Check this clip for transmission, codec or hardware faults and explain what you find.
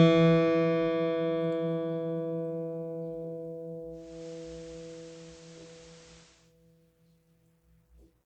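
There's one fault: digital radio blending to analogue, from 3.89 to 6.55 s. The receiver lost its digital stream and cross-faded over about 0.38 s to the station's FM feed, and later back. You hear a level shift of about 1 dB and hiss roughly 25 dB under the music.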